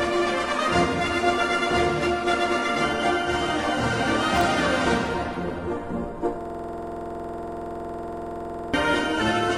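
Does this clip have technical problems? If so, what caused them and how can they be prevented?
Yes: there's a system hang loop from 6.41 to 8.74 s. The system froze while the audio hardware kept replaying the same 46.44 ms chunk, which fits a 2048-sample buffer, about 50 times, giving a rapid 21.5 Hz stutter. Preventing it means fixing the driver or system stall, or adding a watchdog that mutes output when the buffer stops refreshing.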